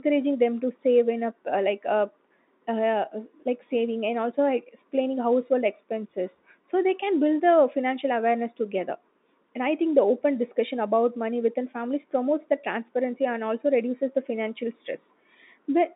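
Speech over G.711 telephone coding, band-limited to the 200 Hz to 3.7 kHz line band with nothing above 3.8 kHz, and no technical faults present.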